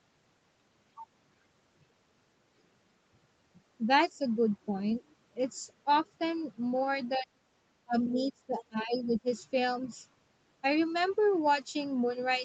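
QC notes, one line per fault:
7.17–7.45 s, 7.85–7.97 s, 8.13–9.27 s, speech suppressed in double talk: the speech dips sharply and breaks into pieces, likely an echo canceller ducking the near talker while the far side spoke.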